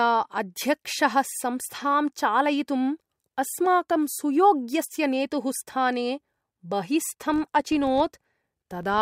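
From 7.21 s to the end of the clip, the speech carries a filter restarted on every block. A filter is losing its memory at each block boundary and starting again from silence, so every block opens with a small transient. The result is a rough buzz at 46.9 Hz, which fits a 1024-sample block, and it grows and shrinks with the loudness of the speech. On a waveform, evenly spaced glitches appear at each boundary. A spectrogram shows faint vertical lines repeating every 21 ms or so.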